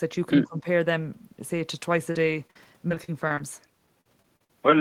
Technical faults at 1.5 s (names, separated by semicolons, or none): none